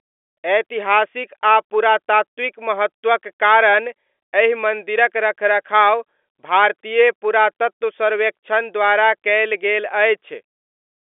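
No technical faults are present in this speech, which is carried over ordinary G.711 telephone coding at 64 kbps, so the sound is confined to the usual line band of roughly 300 Hz to 3.5 kHz with nothing audible above about 3.7 kHz.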